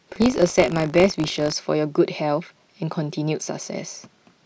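From 0 to 1.54 s, buffer tearing: the ring buffer's writer and reader slipped, splicing stale slivers into each period and causing a 50 Hz robotic buzz.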